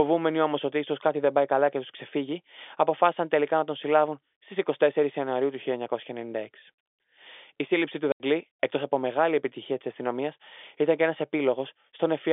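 At 8.12 s, just after "σύλληψη του", there is packet loss filled with silence: an 80 ms hole, which fits four 20 ms packets, ending at 8.2 s before "εκτό από μεγάλη επιτυχία". The narrowband G.711 telephone sound stops dead, with hard edges.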